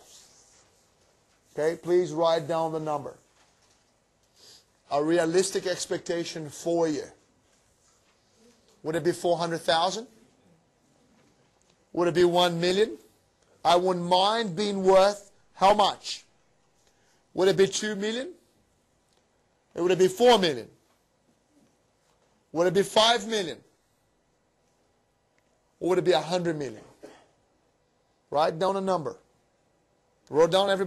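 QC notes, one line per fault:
No faults found in this clip. There is nothing to log.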